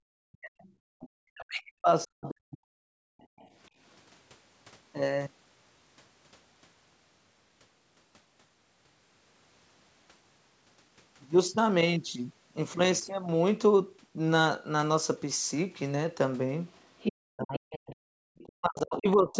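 From 0.2 to 2.8 s the speech dips and breaks up for around two seconds in total, at worst by roughly 40 dB. This is likely speech suppressed in double talk: with both sides talking at once, the echo canceller turned the talker down along with the echo.

Within that stretch, from 0.62 to 1.09 s, a faint second voice sits well below the speech. This is likely the other side's voice leaking through from the loudspeaker. At 0.82 to 0.88 s the room sound drops by about 38 dB, which is background gated by the echo canceller as it clamped the microphone.

The same gating returns from 3.08 to 3.39 s, about 40 dB down. As it releases, a very faint scrap of the far voice slips through at 3.39 to 3.48 s, likely leakage again.

From 16.68 to 18.45 s the leaked voice is nearly as loud as the talker, likely residual echo the canceller failed to remove. From 17.14 s to 19.38 s the talker is cut in pieces by up to roughly 40 dB over about a second and a half, likely suppression in double talk once more.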